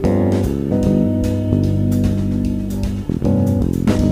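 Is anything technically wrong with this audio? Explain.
Yes. Throughout the clip there is a grainy, rough distortion that rides on the sound itself, which is likely low bit depth without dither. The level steps are coarse, consistent with about 9-bit rounding, and the error sits roughly 40 dB below the signal. Because nothing randomises that rounding error, it tracks the waveform: quiet passages turn gritty rather than sinking into a steady hiss. Dithered low resolution would sound like constant, signal-independent noise instead.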